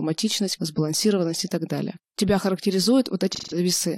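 A speech clip with AAC frame loss and concealment near the end. From 3.32 to 3.57 s the sound turns smeared and noisy instead of clean. About 0.17 s of coded audio is missing, which fits a run of a few lost frames. The decoder fills the gap by reusing the last good spectrum, with altered phase and estimated energy. The result is a brief, blurred patch before normal decoding resumes.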